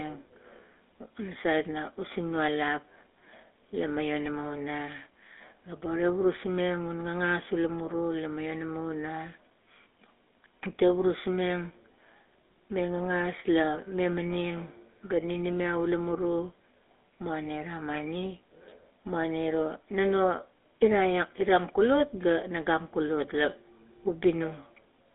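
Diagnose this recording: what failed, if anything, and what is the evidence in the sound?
The codec stage is at fault: the speech has passed through the GSM full-rate codec, and the damage is plainly audible for the whole recording. The band runs only from about 300 Hz to 3.6 kHz, and every voiced stretch carries a buzzy, gravelly roughness. The codec rebuilds speech from a vocal-tract model excited by sparse, evenly spaced pulses rather than the real waveform, which fits a 13 kbit/s GSM full-rate link.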